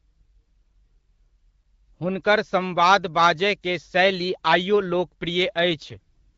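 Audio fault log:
5.70–6.35 s, AMR rate drop: the speech turns rough, raspy and synthetic, with no gap and no narrowing of the band. This fits the network switching the AMR-WB codec from 12.65 kbit/s down to 6.6 kbit/s and spending the freed bits on error protection.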